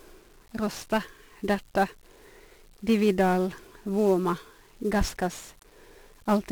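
From start to finish, the speech carries heavy 1-bit DFPWM compression. Each sample keeps only one bit, nudging a running level up or down. The error becomes dense broadband noise. Everything sounds fuzzy and crackly. The treble sinks under hiss. The damage fits a 48 kbps stream.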